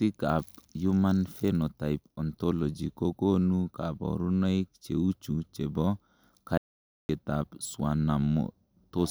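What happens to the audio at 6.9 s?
At 6.9 s you're right in the middle of an audio dropout to silence, which runs from about 6.58 s to 7.09 s, so roughly half a second of the speech just vanishes. It's dead silence, with no room tone or hiss underneath, and the speech cuts off and snaps back mid-flow. That points to the input likely being lost for a moment, a dropped link or brief mute, while the recorder kept writing silence.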